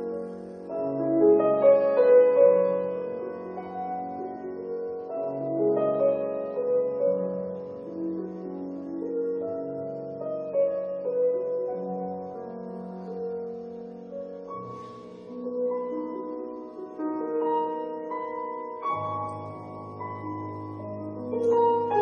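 No technical faults can be heard anywhere in this audio. Nothing in the sound points to trouble in how it was captured, processed or delivered.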